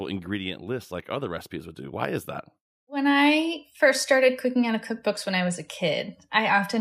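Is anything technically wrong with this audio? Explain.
Yes. Automatic gain rising twice: from 0.63 to 2.35 s by about 5 dB, then 2.86 to 3.7 s by about 4 dB, just before "first started cooking out". The AGC judged the input too quiet and eased its gain up, so voice and background swell together.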